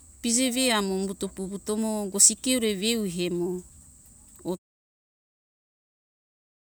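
Speech, with no technical faults found; the level eases down in a smooth editorial fade-out from around 4.5 s to 4.59 s, with no click or hard edge.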